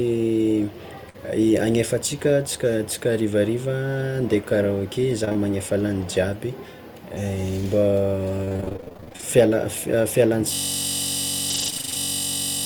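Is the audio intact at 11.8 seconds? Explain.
No. A system hang loop runs from 10.54 s to the end, repeating one 21.33 ms slice as a 46.9 Hz buzz, which fits a 1024-sample buffer; the waveform shows identical repeating cycles. Repeated packet loss (robotic sound) overlaps from 11.5 to 11.97 s, with short holes up to 27 ms patched by repeated sound. It is choppy, with pieces missing, and shows smeared, broken bands on a spectrogram.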